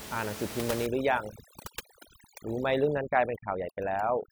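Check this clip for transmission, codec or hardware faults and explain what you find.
One fault is present: overdone noise removal, from 0.86 s to the end at 4.31 s. A noise reduction stage set far too strong pulls individual frequency bands down or out whenever they sit near its noise estimate, taking quiet speech detail with them. The room noise, about 11 dB below the speech, drops and breaks up into twinkling specks.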